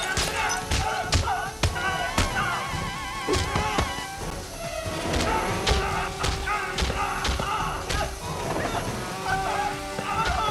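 A gap between stream segments occurs at 4.30 s. Two segments' time stamps fail to meet, leaving about 9 ms uncovered, and the player fills that space with silence. The result is a tiny hole with abrupt edges, a brief dropout that is more a flicker than a pause. Nothing is missing from the audio itself; the timeline is simply stretched by that amount at the join. The spacing fits segments roughly 2 s long.

Chunks out of order follow between 5.14 and 5.23 s. One short block of audio, which fits chunks of about 21 ms, plays later than it should, after blocks that belong behind it. The sound points to it landing three chunks late. All the material is still present, but the sequence is wrong, so this stretch sounds jumbled. Three hard joins are left where mismatched blocks butt against each other.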